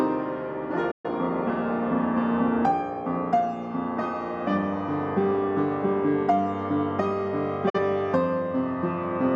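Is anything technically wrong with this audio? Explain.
Yes, there's a digital broadcast dropout, twice: 0.91 to 1.09 s and 7.69 to 7.78 s. The receiver apparently got corrupt or missing frames and muted, so the sound fades out over about 8 ms, goes silent, then returns further on. Whatever aired during those holes is gone.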